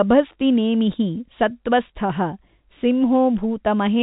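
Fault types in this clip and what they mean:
No faults are present in the speech. It has come through G.711 A-law telephone coding at 64 kbps, so nothing above 4 kHz reaches the ear, and any quantisation noise it leaves is faint and follows the level of the signal.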